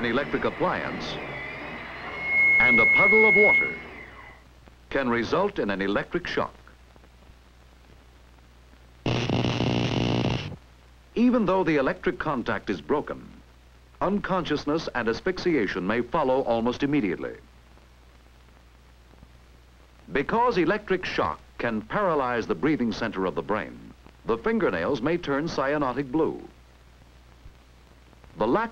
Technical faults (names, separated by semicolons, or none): loudspeaker feedback squeal